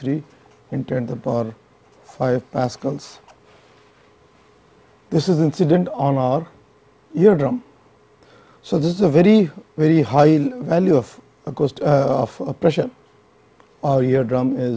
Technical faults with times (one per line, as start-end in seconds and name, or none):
none